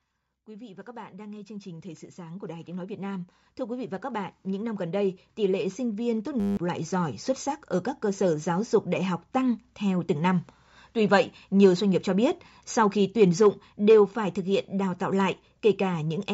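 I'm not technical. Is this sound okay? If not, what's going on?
No, there are two problems.

The first is automatic gain rising. From about 0.45 to 7.26 seconds, the speech gets steadily louder. The background gets louder along with it. That happens because an automatic volume control decided the input was too quiet and kept turning itself up. It works slowly, so you hear a long swell rather than a jump. By the end the level is much higher than at the start.

The second is a system hang loop. From 6.40 to 6.57 seconds, the speech turns into a short, steady buzz. The computer briefly froze. Meanwhile the sound hardware kept replaying the same tiny piece of audio, one hundredth of a second long, 17 times in a row. That repetition, 100 times per second, is what makes the buzz. About 0.15 seconds of real speech is lost there.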